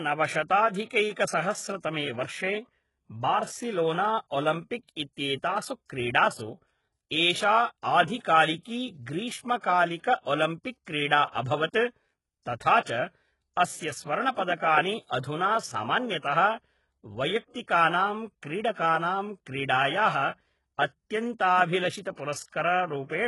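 Gritty, metallic treble runs through the whole of this speech clip. S sounds come out lispy and synthetic, and nothing is present above 11.5 kHz. The likely cause is HE-AAC compression at heavy damage levels, pointing to a very low bitrate around 12 kbps. Only the lower spectrum is genuinely coded. The top is regenerated by copying lower bands upward under a coarse envelope, so its harmonics fail to line up with the real ones beneath.

Twice a short hiss rises just before a sharp attack, which then sounds softened and smeared. The first runs from 8.19 to 8.25 s, spread over 58 ms. The second runs from 18.73 to 18.77 s, over 45 ms. This is pre-echo. The codec spread quantisation noise sized for the loud onset across its whole transform block, so the quiet moment ahead of each attack fills with that noise too.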